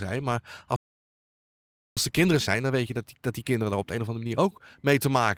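At 0.76 s the speech cuts out mid-flow and stays silent until 1.97 s, a gap of about 1.2 s. This playback stall likely comes from the player running out of buffered data or its thread being blocked.

From 1.97 s to 4.97 s the speech sounds hurried, about 1.15 times normal speed, yet keeps its pitch. This is time-compressed catch-up: the player drops small pieces and cross-fades the joins to clear its backlog.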